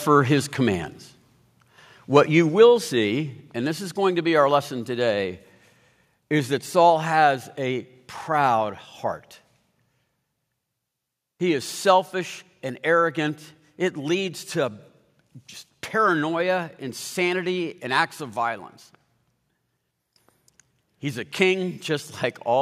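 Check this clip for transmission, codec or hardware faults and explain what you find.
There are four sudden drops in level from a microphone volume stepped down. The likely cause is call software reacting to a hot or clipping input by cutting the device's input gain in one step. The whole signal, speech and background alike, falls about 2 dB at 1.02 s, after "his commands"; about 3 dB at 2.49 s, before "see and this is"; about 2 dB at 3.51 s; and about 2 dB at 6.9 s, between "is that" and "has a proud heart".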